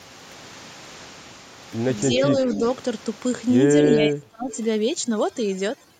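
From 2.09 to 2.2 s, an echo leak trails the speech by 280 ms at about 10 dB down, likely from a loudspeaker echo the far end's canceller missed. On a spectrogram it shows as a weak, time-shifted copy of the harmonic striations. It returns at 2.47 to 2.76 s at about 15 dB down and at 4.51 to 4.56 s at about 20 dB down.

Overlapping that echo, speech suppressed in double talk appears at 2.19 to 2.34 s and 2.55 to 2.61 s as brief dips of roughly 5 dB, each totalling around 70 ms. The likely cause is the canceller ducking both signals at once. In the waveform the envelope notches slightly.

From 3.57 s to the end, overdone noise removal strips the room noise, which sat about 21 dB below the speech. The background becomes near silence with twinkling specks. A spectrogram shows a blackened floor dotted with isolated bright flecks and ragged edges on the harmonics.

Inside that stretch, from 3.95 to 4.51 s, the double-talk suppression deepens to about 30 dB for roughly half a second. 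The speech nearly vanishes there, and the waveform collapses to a thin line.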